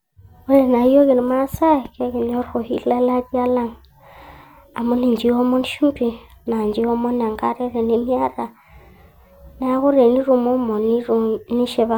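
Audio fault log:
No faults found in the speech.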